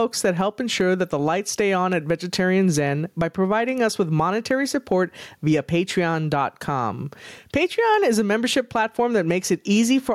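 Gain pumping runs throughout this speech clip: the gain ducks by around 10 dB under each loud sound and recovers between them, likely from excessive input gain driving a fast limiter.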